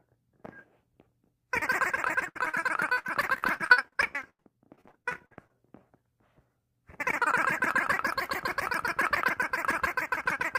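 From 2.07 s to 5.55 s, repeated packet loss (robotic sound) breaks up the audio. Dozens of short holes, the longest 88 ms, are each patched by extending the preceding sound, concealing about 27% of that stretch and leaving it choppy, with pieces missing.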